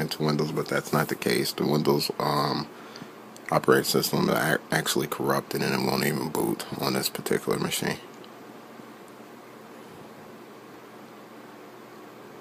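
Nothing here trips the ear: no dropouts, glitches or other technical faults turn up anywhere in the sound.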